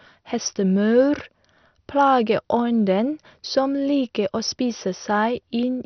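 Throughout the speech, the encoder has likely run short of bits in an MP2 compression stage, the kind of starvation that fits a bitrate around 48 kbps. Its sub-bands above 6.2 kHz have been switched off entirely, so nothing remains there, and the bands still carrying sound are coarsely quantised and flicker in and out. The result is a dull, muffled tone with a gurgling, granular roughness riding on the speech from start to finish.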